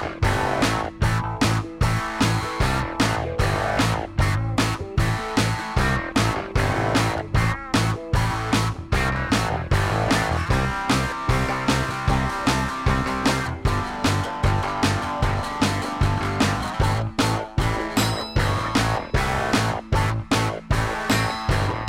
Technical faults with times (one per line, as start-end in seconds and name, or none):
none